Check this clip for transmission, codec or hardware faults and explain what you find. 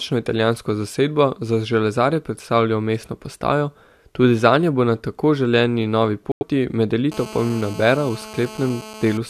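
Two faults are present: a muted gap from corrupt frames, and GSM phone buzz over the last two seconds.

Corrupt frame muted: at 6.32 to 6.43 s, directly after "na tako želeni novi", the speech drops abruptly into silence for about 0.12 s, which fits a run of about six codec frames. Bit errors in the compressed stream made those frames undecodable, so the decoder discarded them and the player filled their slot with silence. Timing is preserved, so the speech resumes on schedule with a section missing rather than shifted.

GSM phone buzz: from 7.12 s to 9.18 s a hard, raspy buzz at 217 Hz sits under the speech at about 17 dB below it. A nearby 2G phone transmits in pulses 217 times per second, and a nonlinear junction in the audio circuitry rectifies those radio bursts into the audio band, producing a fundamental with a dense harmonic series. The buzz is nearly steady, as expected during a call, and it does not follow the speech.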